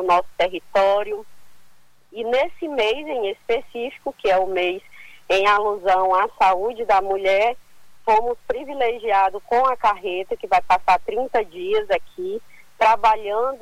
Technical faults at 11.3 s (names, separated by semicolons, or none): none